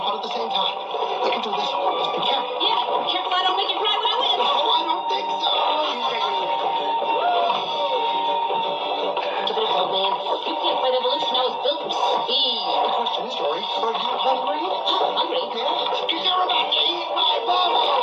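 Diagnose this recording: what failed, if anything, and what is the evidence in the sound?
Nothing failed, and the sound gives no evidence of any fault.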